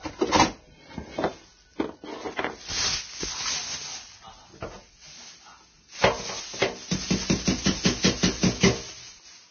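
From start to finish, the audio was most likely squeezed through heavy Vorbis compression at a very low data rate, with damage consistent with something around 19 kbps. The encoder cut everything above 6.5 kHz and quantised the remaining treble so coarsely that its fine detail was replaced by noise of similar energy. The result is dull yet hissy and grainy, with roughened tonal components and smeared, blurred attacks throughout the clip.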